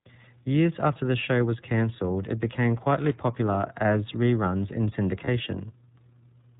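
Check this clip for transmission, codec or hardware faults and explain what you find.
Three faults are present: iLBC codec damage across the whole clip, one burst of loose connector crackle, and one short iLBC frame loss.

The iLBC codec colours the entire speech clip, and the damage is plainly audible. Nothing above 4 kHz survives, so the sound is narrowband and dull. Each frame's excitation is coded on its own, without help from the frame before. That gives the speech a rough, slightly synthetic edge. The character fits the 13.33 kbps mode with 30 ms frames.

Loose connector crackle runs from 2.99 to 3.14 s. A worn or dirty contact is making and breaking rapidly as it shifts. Each break chops the signal. The result is a short, irregular burst of scratching laid over the speech. It lasts about 0.15 s.

Lost iLBC frames occur from 5.24 to 5.29 s. The gap fits a single missing 30 ms frame. 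The decoder filled it by repeating the last pitch cycle mixed with noise. That fill sounds like a brief held vowel with a faint buzz. Because iLBC frames decode independently, the speech is correct again almost immediately once the next frame arrives.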